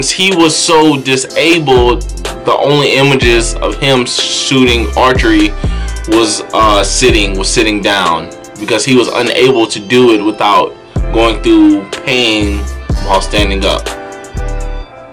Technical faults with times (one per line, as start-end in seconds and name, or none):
0.00-15.12 hard clipping